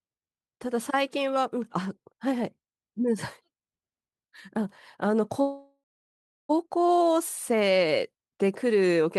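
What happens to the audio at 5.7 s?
From 5.41 to 6.51 s, call audio freeze: the last sound buzzes or hisses away into silence, likely from a drained jitter buffer, then resumes with nothing lost.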